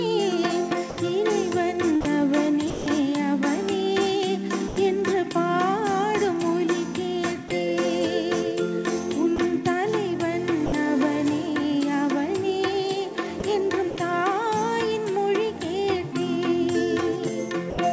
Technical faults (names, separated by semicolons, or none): sound dropped by the voice detector; sound chopped by the voice detector